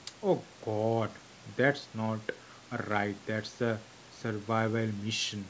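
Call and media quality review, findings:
Nothing stood out on listening to this speech, which tops out around 8 kHz as expected from the microphone processing and a wideband G.722 call path.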